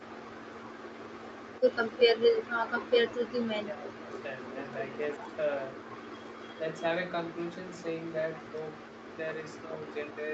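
Right at the start, from 0.6 to 1.64 s, there's an echo leak: a faint, delayed copy of the speech trailing about 0.36 s behind, roughly 20 dB under the main level. It's most likely the far end playing the call on a loudspeaker, with its echo canceller failing to scrub out everything the microphone picked up, so that residue got sent back to us.

Then come the speech dropouts, which look like speech suppressed in double talk. The big one runs from 3.6 to 4.14 s, where the speech sinks hard, something like 30 dB at its deepest, for about half a second. After that there are short, shallower dips: 5.18 to 5.27 s (around 15 dB), 9.65 to 9.73 s and 10.13 to 10.22 s (both around 10 dB). Each is likely the echo canceller getting confused while both sides talked at once and ducking the real talker along with the echo it was trying to kill. The whole thing also sits in an Opus-style call band with nothing above 8 kHz, consistent with roughly 40 kbps.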